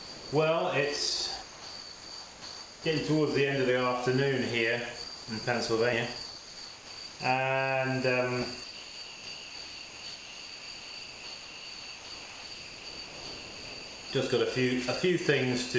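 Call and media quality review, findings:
Sound dropped by the voice detector, at 0.00–0.32 s, 1.42–2.84 s, 5.04–5.28 s, 6.26–7.20 s and 8.64–14.10 s. Sound gives way to steady low noise, then resumes. Longest gap about 5.3 s of lost sound. Likely sender-side VAD misclassifying active sound as background, halting transmission; receiver fills gaps with comfort noise. Band limit at 8 kHz throughout, consistent with a G.722 call path at 64 kbps.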